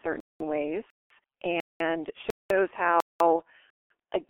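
The whole clip passes through the G.723.1 codec at 6.3 kbit/s, heavily damaged. The band runs only from 250 Hz to 3.4 kHz. The coarse, slow voice model leaves the speech muffled and hoarse. Consonants blur together.

A gap between chunks cuts the speech six times: at 0.20, 0.90, 1.60, 2.30, 3.00 and 3.70 s. Each hole lasts 200 ms. The audio arrives in 0.5 s pieces, and the sound is interrupted at every join. The gaps repeat at a steady rhythm.

From 3.36 to 3.42 s there is VoIP packet loss concealed by the speech codec. About 30 ms of audio went missing. The decoder filled it by extending its last pitch and filter. This is heard as a brief, fading smear in the speech.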